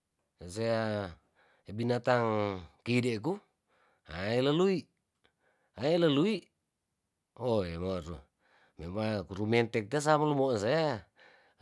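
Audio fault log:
No audible technical faults in this speech recording.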